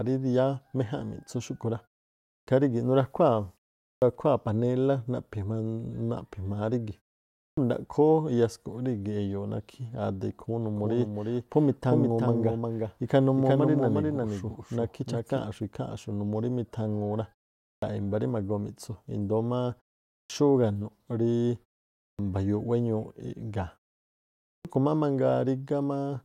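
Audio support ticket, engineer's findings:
Clipped start after a pause: speech onsets cut off abruptly at 2.35, 3.90, 7.45, 17.71, 20.17, 22.06 and 24.53 s, each losing 114–128 ms after pauses of 0.4–0.8 s. The output device sleeps in silence and wakes late.

Doubled audio track, 10.76–15.38 s: a dry full-band echo trails around 0.4 s behind, about 5 dB quieter, starting and stopping abruptly. Likely a second capture path mixing in a delayed copy.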